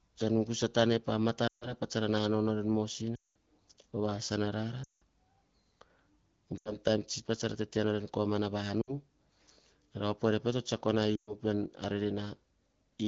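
Lost AMR speech frames: radio errors corrupt short runs of frames, so the HD Voice decoder stretches its last good pitch and vocal tract settings with falling gain. The sound smears, fades quickly and returns rough at 1.47, 3.15, 4.83, 6.58, 8.82 and 11.16 s, each gap lasting 60 to 200 ms.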